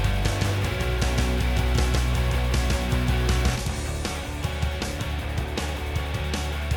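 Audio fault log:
0.00–3.56 s doubled audio track: an equally loud copy trails about 150 ms behind, so every onset shows twice on waveform and spectrogram, then cuts off abruptly; likely a second capture path.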